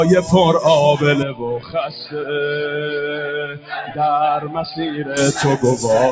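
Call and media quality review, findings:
Noise suppressor applied to music or sounds, throughout. A speech-tuned suppressor treats sustained tones, ambience and tails as noise. Attacks pass, but held material sinks and recovers by roughly 10 dB, giving audible pumping and a thinned, fluttering body.

Input switched to a poorer device, 1.23 to 5.17 s, likely cause. No gap at either transition. Band abruptly narrows below the call path's normal 8 kHz ceiling. Level drops a few dB and a new noise floor sits roughly 30 dB under the signal.

Sound cut by the noise suppressor, 1.59 to 2.15 s and 3.46 to 3.98 s. The suppressor misclassified steady or decaying content as noise and attenuated it beyond the general swing, by about 10 dB and about 12 dB. Transients largely survive.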